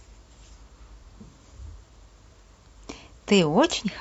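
AAC frame loss with concealment occurs from 0.99 to 1.05 s: a 43 ms gap, which fits one lost frame, where the decoder rebuilt the missing audio from the last good spectrum. The patch sounds briefly smeared and phasey within the speech.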